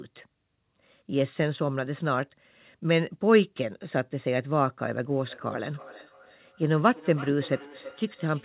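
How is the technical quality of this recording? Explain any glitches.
The recording has one clear fault, feedback echo between two devices, on top of telephone-band audio with nothing above 4 kHz, which fits a G.711 narrowband call path.

From 5.26 s to the end at 8.44 s, the speech returns at roughly 300 ms intervals, up to about 18 dB below the direct speech. Another device in the room is replaying this call and the microphone is picking it up again, outside the reach of the local echo canceller. Each repeat sounds thinner and more ringing.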